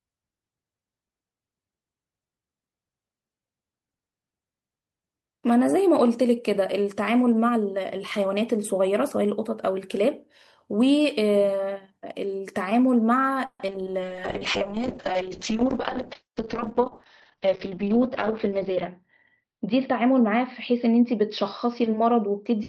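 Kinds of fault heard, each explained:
Repeated packet loss (robotic sound): Between 13.45 and 13.76 s four holes open in quick succession, the longest 140 ms. Each is patched by stretching the preceding sound, so over half that stretch turns choppy. This differs from a single dropout, which leaves one isolated gap.
Call bitrate drop: From 14.0 s to the end, the encoder falls from 32 to 6 kbps, staying at its lowest for about 5 s. Bandwidth shrinks from 20 kHz to 6 kHz, so the speech turns muffled and watery. It lasts seconds and dulls everything, unlike brief loss concealment.
Jitter buffer speed-up: At 15.67–16.79 s and 17.46–19.02 s the receiver trims tiny pitch-period slices to shed excess delay. The speech runs about 4 to 5 percent faster with pitch unchanged, losing roughly 0.15 s in total. Resampling would shift pitch too.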